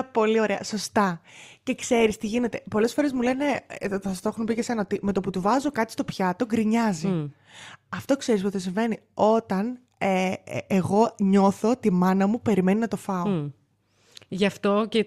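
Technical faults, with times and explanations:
1.79–5.79 s, adaptive stream at a lower bitrate: for about 4 s the speech abruptly degrades, with more audible coding artefacts, then snaps back to full quality just before "στο πιάτο". The switch happens without any gap, which fits an adaptive player dropping to a lower-bitrate rendition, roughly from a 64 kbit/s to a 24 kbit/s Opus stream, while throughput dipped.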